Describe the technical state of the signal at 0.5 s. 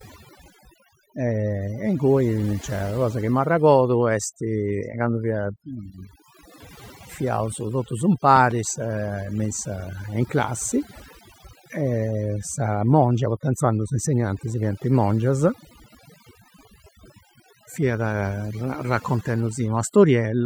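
At 0.5 s the speech shows overdone noise removal, present throughout the clip. An aggressive noise reducer is pulling bands near its noise estimate far down or out entirely, taking quieter speech detail with them, so the background drops and breaks up into twinkling, warbling specks.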